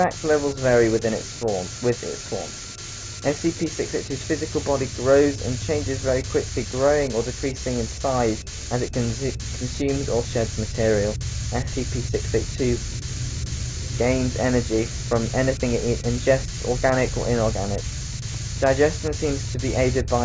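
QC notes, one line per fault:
Nothing to flag here; the audio came through without a single problem worth noting.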